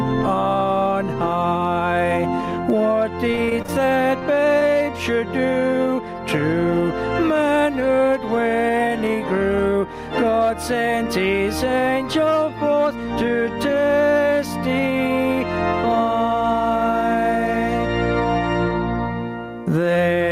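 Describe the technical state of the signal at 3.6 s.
At 3.6 s the signal sits inside a stretch of repeated packet loss (robotic sound) running from 3.31 to 4.63 s. Repeated dropouts, the longest about 26 ms, are patched by extending the preceding sound, giving a choppy texture with pieces missing. The waveform shows smeared, repetitive cycles, and the spectrogram shows stuttering blocks and vertical breaks.

Gain pumping also runs throughout, likely from input gain set far too high with a fast limiter clamping each loud sound. The gain swings by around 20 dB, so the waveform envelope looks flattened.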